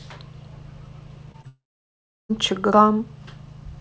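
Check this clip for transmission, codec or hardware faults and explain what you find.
Three transmission faults are present, all clustered in the middle of this speech clip.

Short concealed packet loss occurs twice, at 1.32–1.36 s and 1.42–1.45 s. About 20 ms of audio arrived too late each time. The decoder extended the preceding sound, leaving a brief smear.

A long network dropout follows at 1.47–2.31 s. The last sound continues as a fading buzz, then roughly 0.7 s of silence. The likely cause is a stretch where no packets arrived. Speech resumes with that portion gone.

The call path band-limits everything above 8 kHz, which fits a G.722 wideband codec.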